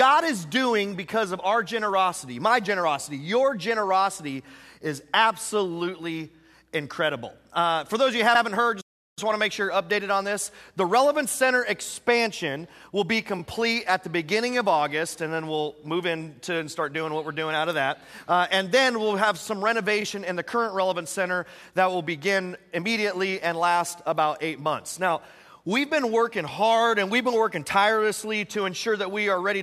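A short piece of audio with a couple of delivery problems worth flagging. The main one is repeated frames: at 8.34–8.41 s a 72 ms chunk gets played twice, which fits a run of three 24 ms compressed frames being written or sent again. Then at 13.38–13.41 s and 20.01–20.03 s a single 24 ms block repeats. Each one comes across as a quick stutter, and together they stretch the clip by about 120 ms. Shortly after that first stutter, at 8.81–9.19 s, there's a playback stall: the sound just cuts out mid-flow for about 360 ms and then carries on. That's likely the player running dry of data or having its output thread blocked, rather than anything in the recording itself.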